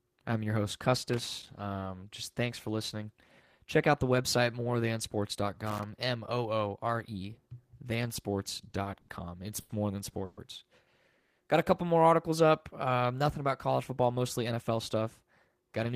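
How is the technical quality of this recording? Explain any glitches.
The speech carries several audible faults: crackle early on, a cluster of stalls and two freezes in the middle, and a hurried stretch at the end.

Loose connector crackle, from 0.95 to 1.54 s and again from 5.66 to 5.83 s, is an irregular scratchy burst over the speech. A worn or dirty contact is making and breaking as it shifts, chopping the signal.

Short stalls from a late packet occur at 8.69 to 8.73 s, 8.83 to 8.87 s, 9.01 to 9.10 s and 9.60 to 9.71 s. Each holds a sound unnaturally long, with a faint buzz or dip, for 20, 20, 70 and 90 ms respectively. Each time, the next packet was late and the jitter buffer ran dry, so the receiver stretched the last sound until it came. Playback then resumed from the same point, with nothing lost.

Call audio freezes at 10.25 to 10.39 s and 11.19 to 11.39 s sound like the audio catching on a fading buzz or hiss for about 120 ms and 180 ms, never dropping to silence, before carrying on where it stopped. 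The likely cause is packets held up in transit, emptying the buffer.

A jitter buffer speed-up runs from 14.11 to 15.93 s. The speech sounds hurried, at about 107% of normal pace, though the pitch is unchanged. Having built up extra buffered delay, the receiver trimmed many tiny pitch-period slices, roughly 150 ms in total, to catch up.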